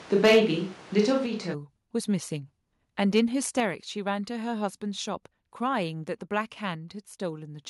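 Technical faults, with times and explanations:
0.00–1.52 s, switch to a distant microphone: From the start the voice sounds hollow, roomy and thin in the bass, with room noise only about 25 dB below it, then turns close again at 1.52 s. The close microphone likely dropped out, leaving a farther pickup.
0.24–0.40 s, 0.99–1.01 s, 3.16–3.20 s, microphone overload: Loud syllables take on a harsh, crackly edge, strongest in the first burst, which goes about 6 dB over with roughly a sixth of its samples flattened, and milder later at about 1 and 2 dB over. The input gain was likely set too high, so peaks hit the converter ceiling.
0.26 s, 1.26 s, 3.60 s, microphone volume stepped down: The voice and background drop together, by about 2 dB, 5 dB and 4 dB, each shortly after a distorted peak. The call software likely saw clipping and cut the device's input volume in a single step.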